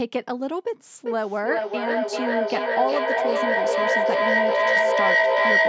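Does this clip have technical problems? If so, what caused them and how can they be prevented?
Yes. From 1.06 s to the end there is feedback echo between two devices. The sound returns roughly every 400 ms, and the repeats build to about 6 dB above the speech instead of dying away. A second device in the room replays this microphone's signal, the microphone picks it up again, and its echo canceller cannot remove sound played by another device. To prevent it, join from only one device per room, or mute the other device's speaker and microphone.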